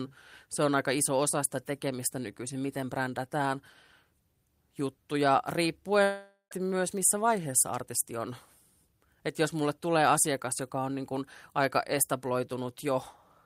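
At 6.03 s the speech cuts out. The last sound smears into a fading buzz, then about 90 ms of silence. It returns at 6.53 s on "myös missä vaiheessa artisti", with nearly half a second lost. The likely cause is a long network dropout.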